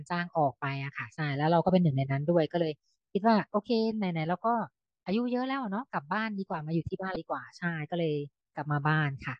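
A speech recording with damaged data in a compressed stream: corrupted bytes derail the decoder, which loses frame sync and resynchronises, producing a brief glitch from 7.13 to 7.16 s.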